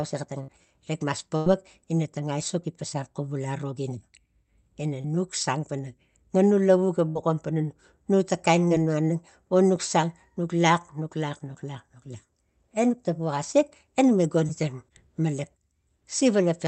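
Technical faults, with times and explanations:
0.43–0.49 s, 5.01–5.05 s, 8.68–8.71 s and 14.48 s: short concealed packet loss. 50, 30, 20 and 10 ms never arrived, so the receiver extended the preceding sound, leaving brief smears or wobbles.
1.37–1.47 s and 7.09–7.16 s: burst of packet loss. 90 and 60 ms went missing in a row, so the last sound was stretched and faded into a held buzz or hiss before the audio resumed further on.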